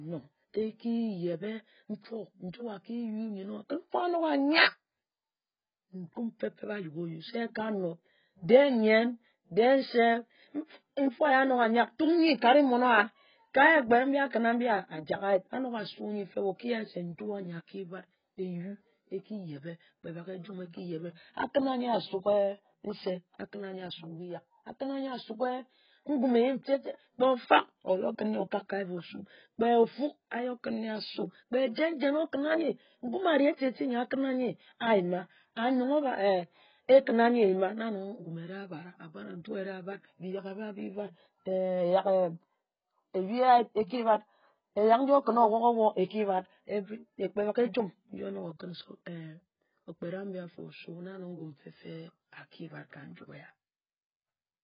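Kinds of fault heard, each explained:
AAC compression, throughout: The speech is dull and smeared across the whole clip, with nothing above about 5.1 kHz, and sustained sounds and sibilants carry a warbling, fizzy texture. This is likely heavy AAC-LC coding at a very low rate, consistent with roughly 12 kbps. At that rate the encoder cannot afford the upper bands, so it drops them and quantises what remains coarsely, leaving gaps that come out as smear and swirl.
Pre-echo, 14.31 to 14.33 s: A brief hiss runs about 25 ms ahead of a sharp attack, which arrives softened rather than crisp. The transform coder spreads its quantisation error evenly through each block. When an abrupt onset sits near the end of a block, the noise level set by the loud onset also fills the quiet stretch before it, where nothing masks it. That is why the hiss precedes the attack instead of following it.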